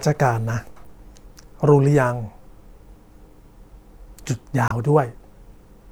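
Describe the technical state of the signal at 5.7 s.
The signal at 5.7 s is intact, with no audible fault at that point in the speech.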